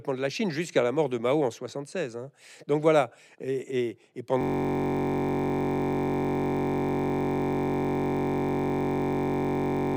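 A system hang loop begins at 4.41 s and runs to the end of the speech clip. The playback system stopped feeding new audio while the hardware kept replaying the same ring buffer, so one 21.33 ms slice of sound repeats around 260 times. That loop length fits a 1024-sample buffer. Because the slice is so short, the speech gives way to a steady, flat buzz at about 46.9 Hz, the rate at which the loop repeats.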